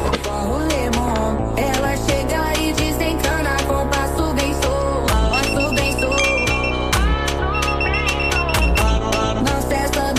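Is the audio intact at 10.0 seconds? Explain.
Yes, the audio is intact at 10.0 seconds, with nothing audible there that breaks, drops out or distorts the sound.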